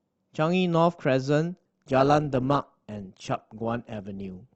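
A speech clip in which an adaptive stream switches to a lower bitrate at 1.59 s and stays there to the end. The quality suddenly drops as codec artefacts rise, which fits a step down from roughly 64 kbit/s Opus to about 16 kbit/s as the connection slowed. Unlike a dropout or buffering stall, there is no gap or repeat; unlike a fixed low-pass filter, the whole codec character changes abruptly and never recovers.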